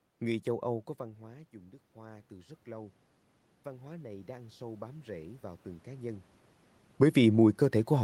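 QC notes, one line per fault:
0.97–3.04 s and 3.64–6.32 s: automatic gain rising. The input level dropped by about 17 dB, and the gain control responded by gradually raising its gain by about 6 dB over two to three seconds. The voice and the room noise therefore swell up together.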